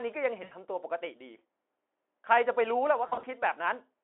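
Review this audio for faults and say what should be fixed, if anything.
VoIP packet loss concealed by the speech codec occurs at 0.43–0.52 s (80 ms missing) and 3.07–3.26 s (120 ms scattered over 160 ms, longest gap 40 ms), consistent with lost 20 ms frames. The decoder repeats its last pitch and filter with falling gain, so the speech is stretched into a buzzy tone or a coloured noise that fades. On a spectrogram, smeared, repeated spectra fade within the 300–3400 Hz Speex band, and the waveform shows a decaying, overly regular envelope. Adding forward error correction, a deeper jitter buffer, or prioritising voice traffic would reduce these losses.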